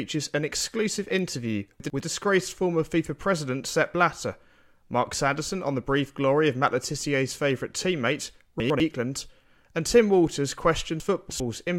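At 1.8 to 2.0 s, just after "an exclusive interview" and before "disgraced former", chunks play out of order. One 100 ms chunk arrives late and plays after the chunk meant to follow it. Nothing is missing, but the sound jumbles at the hard joins. The same happens at 8.6 to 8.8 s, after "favourite teammate". At 11.0 to 11.4 s a 100 ms chunk lands three chunks late, giving a longer garbled stretch.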